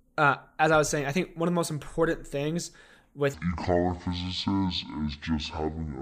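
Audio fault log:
3.34–6.02 s: section at the wrong speed. Speech slows to 0.55x and drops about ten semitones together, unlike a pure pitch shift; likely a mismatched playback clock.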